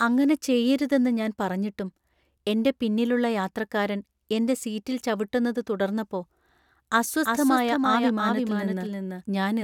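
A speech clip that picks up a doubled audio track at 7.25 s and keeps it to the end. A second, full-band copy cuts in abruptly around a third of a second behind, about 5 dB quieter, with no room colour. It's likely a slower second capture path getting mixed in.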